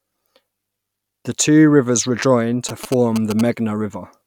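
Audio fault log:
2.69–3.41 s, GSM signalling bursts: a nearby 2G phone exchanging control bursts with the network, rectified by the audio circuitry, gives a galloping run of brief buzzes at about 217 Hz, roughly 10 dB under the speech, starting right after "two rivers rejoin".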